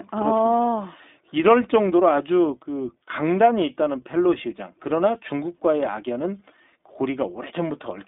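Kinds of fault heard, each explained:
iLBC codec: the speech went through a narrowband VoIP coder that rebuilds each 20 ms frame's excitation independently, which fits its 15.2 kbps mode. The band is cut to roughly 250 Hz to 3.6 kHz, and the result sounds plainly rough and synthetic.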